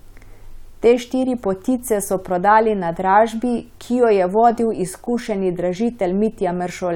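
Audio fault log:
No fault is logged for this speech clip.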